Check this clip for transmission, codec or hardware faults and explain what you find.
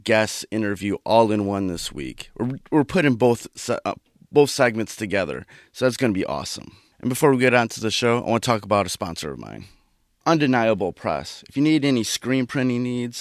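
No faults turn up anywhere in the clip.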